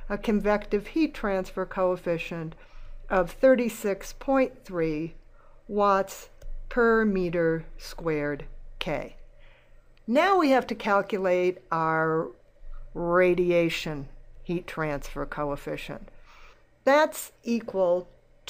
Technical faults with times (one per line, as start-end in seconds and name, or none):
none